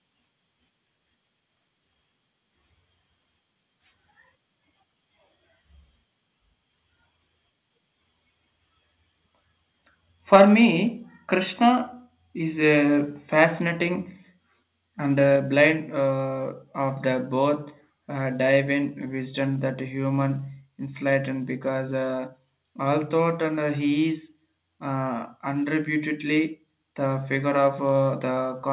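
From 10.33 to 10.42 s the loudest syllable takes on a harsh, crackling edge, its peaks flattened by about 4 dB, with a few percent of the samples squared off. This is likely microphone overload: input gain set so high that the converter ran out of headroom.

Right in the middle of that, at 10.36 s, voice and background both drop abruptly by about 4 dB, and at 15.36 s they drop again by about 3 dB, just before "blind uh of the". Each is likely the microphone volume stepped down, as the call software reacted to the microphone being too loud or clipping by lowering the device's input level in a single jump. Both steps sit inside the narrow telephone band of the call path, with nothing above 4 kHz, which fits a 64 kbps G.711 mu-law codec.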